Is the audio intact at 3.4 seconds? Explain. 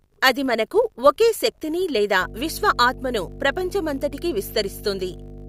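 No. At 3.4 s, two faults overlap. A filter restarted on every block runs through the whole speech clip. The filter drops its stored state at each block boundary and starts from silence, so every block opens with a small transient. These repeat 50 times a second, which points to blocks of about 20 ms. The result is a 50 Hz buzz that rises and falls with the speech level. A spectrogram shows evenly spaced vertical striations, and the waveform shows regular tiny spikes.

Mains hum has also been present since 2.21 s and continues to the end. Power-line interference couples into the signal as a steady 50 Hz tone, roughly 15 dB below the speech. On a spectrogram it appears as a constant horizontal line at 50 Hz. The waveform gains a slow, even ripple under the speech.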